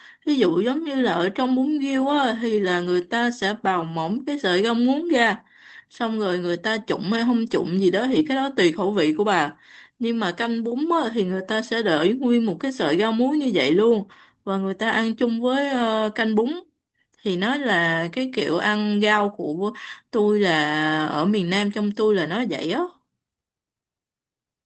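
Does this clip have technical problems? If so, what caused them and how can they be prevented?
Yes. Around 8.11 to 8.21 s there's a lost packet rebuilt from error correction. Roughly 60 ms of speech went missing across what sounds like three packets and was patched from the low-bitrate copies carried in the following packets. There's no gap, but that stretch sounds rougher and noisier than the speech around it. To prevent it, improve the network path, for example with a wired connection or less competing traffic, so fewer packets drop.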